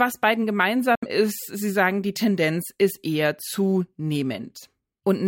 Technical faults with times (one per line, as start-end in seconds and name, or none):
0.95-1.04 Bluetooth dropout